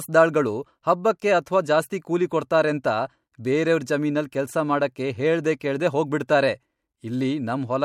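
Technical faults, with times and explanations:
5.60 and 6.28 s, pre-echo: after "ಕೆಲ್ಸ ಮಾಡಕ್ಕೆ ಹೇಳ್ದೆ" and "ಕೆಲ್ಸ ಮಾಡಕ್ಕೆ ಹೇಳ್ದೆ ಕೇಳ್ದೆ", a 12 ms hiss, about 15 and 18 dB up, leads each softened attack. This fits a 26 ms block with no switch to short blocks. Unlike a click, the noise comes before the onset.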